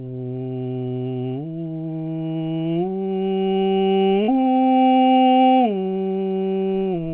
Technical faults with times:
4.24-4.30 short concealed packet loss

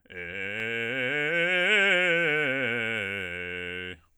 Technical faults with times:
0.60 block of digital silence

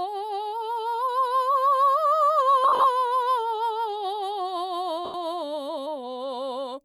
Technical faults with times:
2.64-2.84 lost LE Audio frames
5.05-5.15 lost LE Audio frames

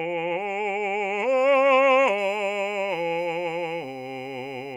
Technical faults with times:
2.18-4.75 USB whine

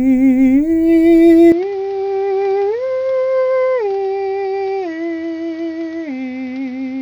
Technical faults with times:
1.52-7.02 input switched to a poorer device

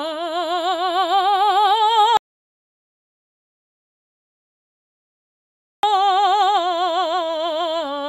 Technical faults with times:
2.17-5.83 audio dropout to silence

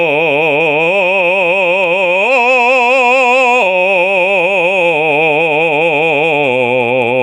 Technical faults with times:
0.00-7.23 gain pumping

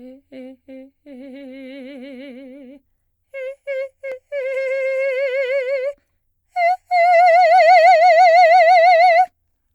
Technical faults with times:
none

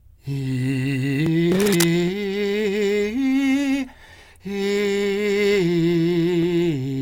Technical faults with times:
0.00-7.01 sample clock jitter
1.59-1.86 cable scratch noise

